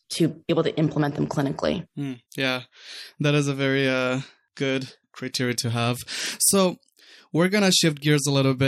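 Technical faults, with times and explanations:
0.49 s, compressed frames skipped: Just before "able to implement them", the speech jumps ahead by about one frame, roughly 30 ms of audio. The decoder dropped a missing or damaged frame. Overlapping neighbour frames smear the join into a soft blip rather than a click.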